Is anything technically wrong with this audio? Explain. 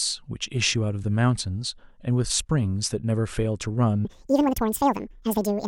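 Yes, there's one problem. From 4.05 s to the end at about 5.67 s, the speech plays at the wrong speed, running twice as fast as the rest. Speed and pitch jump together right at the switch, so the speech suddenly turns hurried and chipmunk-like, sitting roughly ten semitones higher. The likely cause is that stretch being played against the wrong clock, so it gets pushed through at double rate instead of at the pace it was recorded.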